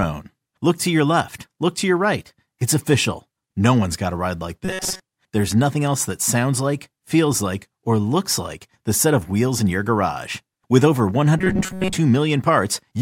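At 4.65 to 5.01 s, right after "got a ride like", and again at 11.38 to 11.96 s, the speech turns into a rigid metallic buzz at 188 Hz: robotic sound, likely from repeated short buffers of about 5.3 ms, with most audio replaced by repeats.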